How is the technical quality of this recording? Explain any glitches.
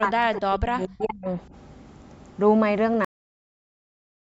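The recording has two clear faults, one at the start and one at the end; the speech is band-limited to about 8 kHz, consistent with call microphone processing.

From 0.0 to 1.26 s the speech level repeatedly dips and breaks up, falling by roughly 35 dB at its deepest, for about a second in total. This is likely speech suppressed in double talk: an echo canceller, facing both sides talking at once, attenuated the near talker along with the echo.

At 3.05 s the audio stops abruptly, mid-sound, and stays in digital silence to the end. This is a cut-off end: the final buffers were never written, so the signal drops to silence with no natural decay.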